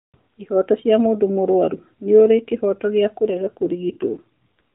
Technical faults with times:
3.26-4.60 AMR rate drop

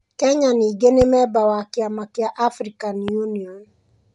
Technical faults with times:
0.00-4.14 Bluetooth LC3 compression
1.01-1.04 loud pop
3.08-3.11 loud pop

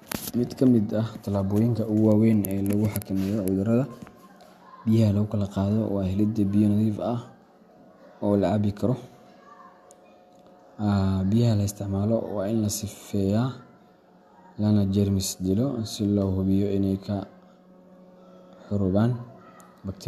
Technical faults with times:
none

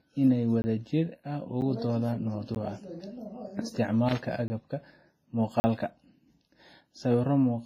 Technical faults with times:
0.00-7.65 WMA compression
0.62-0.64 block of digital silence
1.61 block of digital silence
2.55 block of digital silence
4.09-4.22 loose connector crackle
4.48 block of digital silence
5.60-5.64 block of digital silence

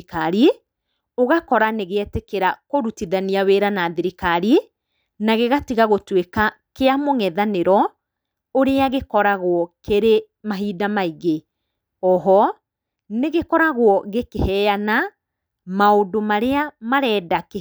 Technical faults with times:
none

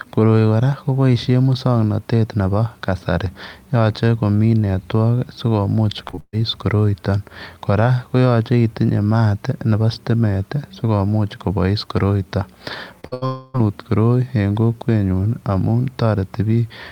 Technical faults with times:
6.07-6.35 repeated packet loss (robotic sound)
13.01-13.05 short concealed packet loss
13.07-13.23 burst of packet loss
13.25-13.56 long network dropout

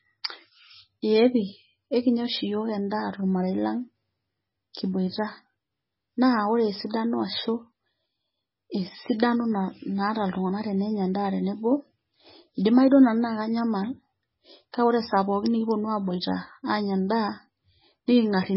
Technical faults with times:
0.00-18.56 MP3 compression
4.73 pre-echo

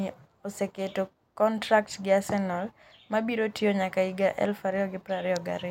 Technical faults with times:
none

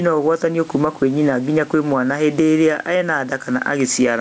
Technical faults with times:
0.00-4.21 gain pumping

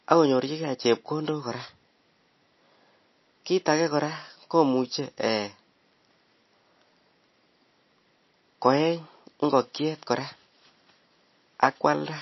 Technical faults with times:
0.00-12.22 MP3 compression

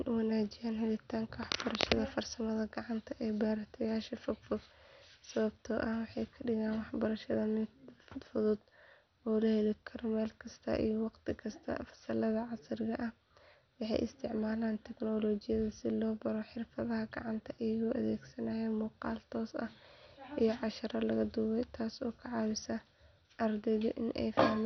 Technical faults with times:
0.00-24.66 MP2 compression

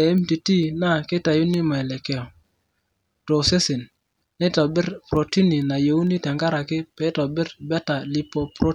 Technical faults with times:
0.18-8.34 word clock ticks

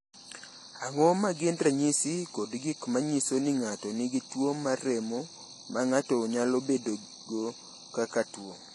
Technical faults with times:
0.00-8.75 AAC compression

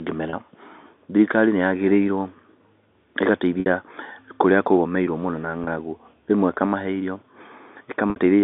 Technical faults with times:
0.30-0.33 packet loss with pitch repetition
3.60-3.66 packet loss with pitch repetition
5.64-5.67 packet loss with pitch repetition
8.10-8.16 packet loss with pitch repetition

